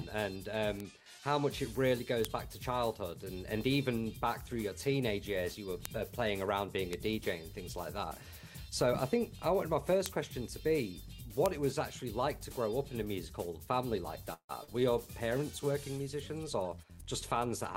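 A short stretch of audio carrying four kinds of digital fault. Six bit error spikes land at 0.80, 2.25, 5.85, 6.93, 10.06 and 11.46 s, each a lone, sharp, full-band tick lasting one to three samples, where a flipped bit throws the sample value far off and straight back. Because they ignore the surrounding sound and leave nothing continued or missing, they differ from concealment artefacts. From 14.33 to 14.51 s there is a call audio freeze: the last sound hangs on as a fading buzz or hiss and then drops to silence for about 70 ms before resuming exactly where it stopped, likely because delayed packets emptied the jitter buffer. Nothing is lost, but the audio now runs 158 ms later. Just after, at 14.63 to 14.69 s, a short concealed packet loss appears as a brief smear over 40 ms of sound that never arrived. Unlike the freeze, audio is actually missing here and no delay is added. From 16.43 to 17.47 s a jitter buffer speed-up plays the audio at 109% speed with its pitch unchanged, trimming about a tenth of a second in small pitch-period cuts. 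The result sounds hurried rather than raised in pitch.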